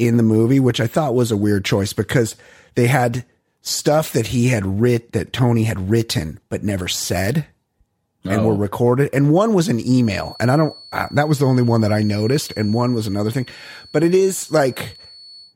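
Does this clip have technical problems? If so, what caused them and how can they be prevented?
Yes. From about 9.93 s right through to the end at 15.56 s, there's a feedback whistle: a thin, steady tone at 4.4 kHz sitting behind the speech, roughly 25 dB below it and swelling and fading slowly in level. It's likely a loudspeaker feeding back into the microphone with the loop gain hovering just at the edge, so that one frequency keeps ringing without building up. To prevent it, turn down the monitor level, move the mic away from the speaker, or notch out 4.4 kHz.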